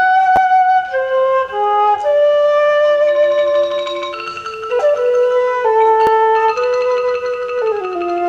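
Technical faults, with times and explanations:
0.36–0.38 s and 6.07 s, repeated buffer: fresh audio missed its deadline, so the device replayed its last block, twice at 0.36 s and once at 6.07 s. The hard joins around each repeat of a block this short, consistent with a 10 ms buffer, produce a brief click-buzz.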